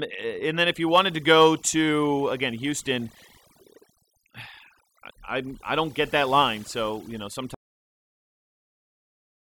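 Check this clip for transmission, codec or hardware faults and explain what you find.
Two faults stand out: overdone noise removal across the whole recording, and an audio dropout to silence near the end.

Overdone noise removal runs throughout. A noise reduction stage set far too aggressively cuts individual frequency bands whenever they sit near its noise estimate, taking quieter parts of the speech along with the noise. The background collapses into near silence dotted with twinkling specks.

The audio dropout to silence begins at 7.55 s, right after "you know", and lasts to the end. The input was likely lost, through a disconnect, link failure or mute, while recording carried on writing silence. The sound cuts off mid-flow into silence with no room tone.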